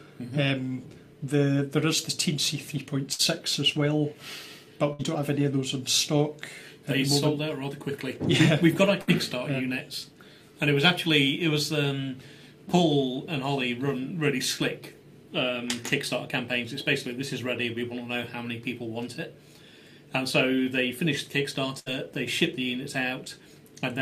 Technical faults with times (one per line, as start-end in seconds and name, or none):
3.13-3.22 burst of packet loss
4.93-5.02 burst of packet loss
9.01-9.10 burst of packet loss
21.79-21.89 burst of packet loss